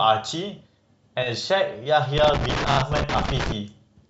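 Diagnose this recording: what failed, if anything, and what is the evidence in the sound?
Brief stutters at 1.22 to 1.28 s and 2.71 to 2.77 s: repeated frames. A 20 ms then 30 ms block replays twice more, adding 40 and 60 ms.

Irregular scratchy crackle from 2.18 to 3.52 s is loose connector crackle in the analogue wiring: a dirty or worn contact intermittently breaking and chopping the signal.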